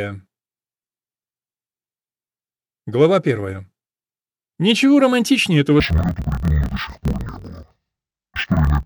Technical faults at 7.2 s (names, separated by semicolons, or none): interleaved audio read as planar